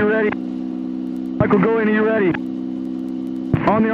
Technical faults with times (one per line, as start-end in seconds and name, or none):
2.37 corrupt frame decoded